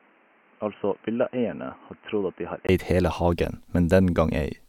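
From the start to 2.69 s the speech is narrow and boxy, with nothing above 3.1 kHz, about 10 dB quieter, and carrying its own background noise roughly 30 dB below the voice. A 20 ms silence then precedes full-band sound at "eid hele hagen". This is likely an input switched to a poorer device. Tone, level and noise floor all change together at a gap, which rules out a simple filter or EQ change.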